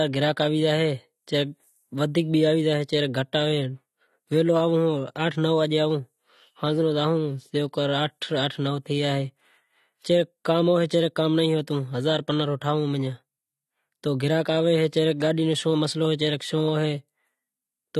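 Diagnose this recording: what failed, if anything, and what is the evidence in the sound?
Codec stage. The speech sounds dull and smeared throughout, with nothing above 13.3 kHz. Likely AAC compression, at a low bitrate near 32 kbps.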